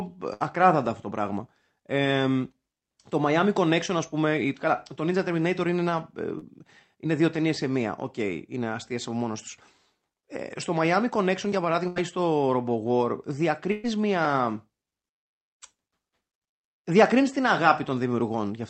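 Right at the start, 0.33 to 0.42 s, just before "αυτό το πράγμα", there's a burst of packet loss: about 60 ms of speech never arrived, and the receiver stretched the last sound for roughly 70 ms, fading it into a held buzz or hiss before jumping ahead. At 6.38 to 6.44 s, leading into "είναι δύο ταινίε σε", a short concealed packet loss covers a 40 ms hole with a brief synthesized continuation, heard as a quick smear or wobble. Two more bursts follow, at 11.88 to 11.98 s (80 ms gone) and 13.72 to 13.86 s (120 ms gone), each papered over with a fading extension of the previous sound, the second with no true silence in between.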